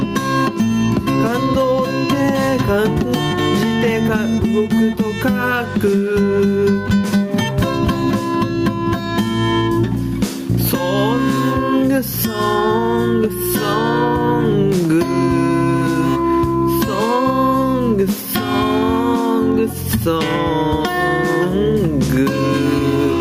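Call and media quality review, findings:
Gain pumping throughout the clip. Level swings by roughly 10 dB, ducking on loud sounds and recovering between them. Likely cause: input gain set far too high, with a fast limiter or compressor clamping each loud moment and releasing afterwards.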